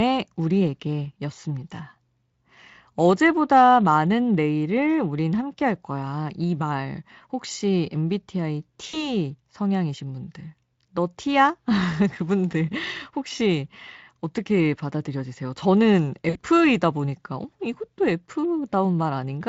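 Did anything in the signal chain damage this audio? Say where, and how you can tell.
Yes. The damage comes from the network: packets went missing, and VoIP packet loss concealed by the speech codec filled the gaps. It happens at 8.89 to 9.01 s, about 40 ms lost, and at 16.29 to 16.43 s, about 60 ms lost, which fits two and three 20 ms Speex frames. In each gap the decoder repeats its last pitch and spectral shape at falling gain, so the speech smears into a fading buzzy tone or coloured noise. Because each frame builds on the previous one, the audio stays weak or distorted just after each gap ends.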